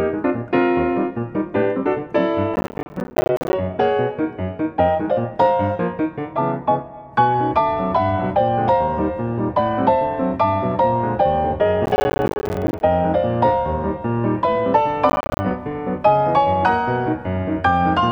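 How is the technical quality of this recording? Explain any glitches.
The recording is marred by three bursts of processor overload crackle. They fall at 2.54 to 3.53 s, 11.86 to 12.81 s, and 15.10 to 15.40 s. The processor falls behind and misses many short buffer deadlines in a row. Each buffer seems to be around 10 ms long. Every missed buffer drops out to silence with hard edges. Dozens of these tiny gaps stack up, so the sound tears and crackles, then clears once the load eases.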